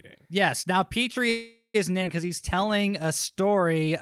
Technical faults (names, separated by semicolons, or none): call audio freeze; skip ahead; jitter buffer slow-down